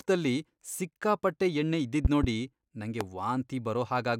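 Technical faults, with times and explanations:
2.05–2.26 s, loud pop: two sharp pops in quick succession, peaking about 15 dB above the speech, which carries on underneath. This is likely a voltage pulse from a plug, switch or static, added to the signal and shaped by later circuits into audible thumps.
3.01–3.04 s, loud pop: a single brief pop, the stronger of the two events at about 20 dB above the speech. A short electrical spike likely sums with the audio, so a hard click sits on top while the speech continues beneath it.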